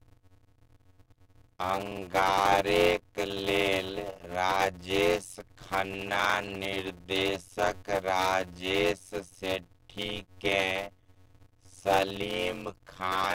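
Speech, with a block size mismatch (padded) running throughout. A steady buzz sits under the sound at about 91.9 Hz, the rate at which blocks arrive. Each block carries real audio followed by a short silent stretch. The gaps stretch the timeline, so the speech plays at 0.533 times normal speed while keeping roughly its normal pitch. That ratio fits 256-sample blocks being written into reads of about 480 samples, with the remainder zero-filled.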